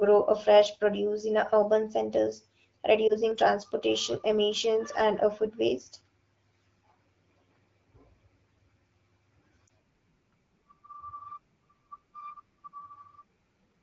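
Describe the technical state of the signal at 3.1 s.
A lost AMR speech frame hits from 3.08 to 3.13 s, just before "transportation emissions and a". One 20 ms frame failed its checksum. The decoder filled the gap from the last good frame at lower gain. The result is a brief dip or warble in the wideband speech.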